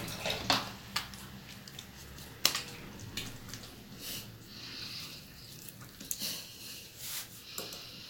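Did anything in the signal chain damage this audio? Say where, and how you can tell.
No, nothing along the way seems to have harmed this recording, and I can't pick out any point in the chain where the audio took damage.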